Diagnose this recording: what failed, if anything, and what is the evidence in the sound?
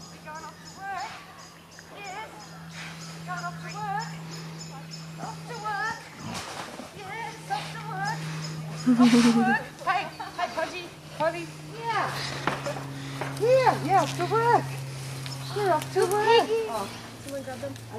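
Nothing in the signal chain points to a failure: the audio runs continuously, with no dropouts, clicks, distortion, or interruptions at any stage from capture to playback.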